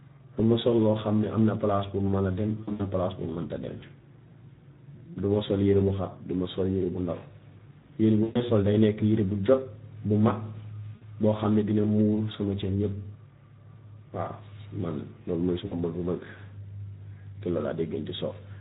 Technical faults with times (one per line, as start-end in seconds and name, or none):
0.00-18.60 Speex codec
2.63-2.87 VoIP packet loss concealed by the speech codec
8.23-8.43 VoIP packet loss concealed by the speech codec
10.95-11.06 VoIP packet loss concealed by the speech codec
15.65-15.76 VoIP packet loss concealed by the speech codec